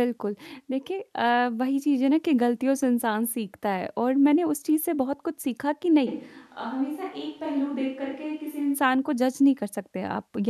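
At 6.09 s the speech suddenly turns roomy and hollow, with thinner bass. The level drops by roughly 5 dB. A faint room noise appears, about 35 dB below the speech. This is a switch to a distant microphone. The close microphone's signal was likely lost, so a microphone farther away carried the recording. It picks up more of the room than the mouth. At 8.73 s the close sound returns just as abruptly.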